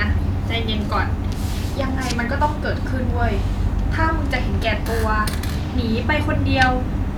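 No dropouts, clipping, glitches or other transport or processing faults are audible anywhere in the recording.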